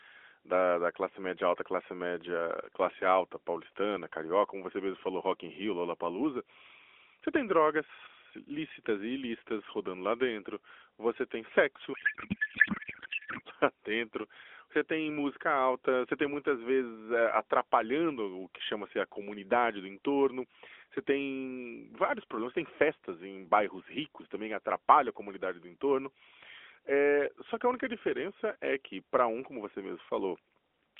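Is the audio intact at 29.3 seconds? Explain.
Yes, at 29.3 seconds the speech is intact, carried on the narrowband AMR mobile codec at 12.2 kbps with no fault at that moment.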